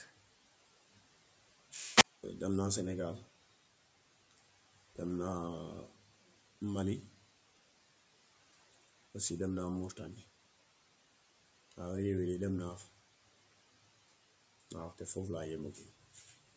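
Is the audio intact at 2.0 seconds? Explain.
No. A wireless microphone squelch dropout runs from 1.93 to 2.23 s: hiss rises, then the receiver mutes for about 220 ms, showing as a flat waveform gap and blank spectrogram band.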